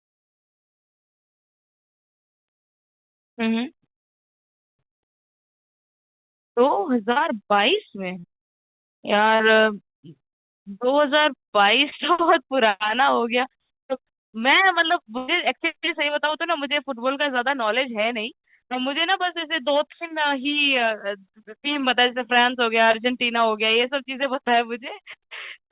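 Speech heard over a narrowband call line, consistent with G.711 mu-law at 64 kbps with nothing above 4 kHz, shows short concealed packet loss at 7.12, 8.20, 9.36, 11.90, 16.30 and 22.92 s. Each time, 20 to 40 ms of audio failed to arrive and was filled by extending the preceding sound, leaving a brief smear or wobble before the real signal blends back in. A longer burst of packet loss runs from 15.18 to 15.30 s, where about 100 ms went missing. The filled sound there is stretched long enough to become a held buzz or fading hiss, and the audio then resumes further along with that stretch absent. That length and the audible jump ahead distinguish the burst from the quick blips.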